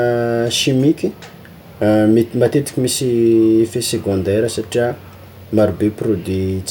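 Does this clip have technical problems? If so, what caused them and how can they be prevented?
No, nothing technical goes wrong anywhere in this speech recording, so there's nothing here that needs preventing.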